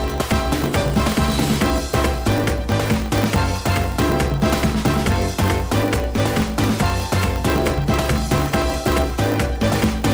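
Throughout the clip there is a block size mismatch (truncated): one stage writes longer blocks than the next stage reads, so the tail of every block is discarded. The regular cuts produce a steady 50 Hz buzz, which fits blocks of about 1024 samples. The audio runs about 1.07 times fast at roughly normal pitch. A waveform shows discontinuities every 20 ms, and a spectrogram shows vertical striations at that spacing with a harmonic comb from 50 Hz upward.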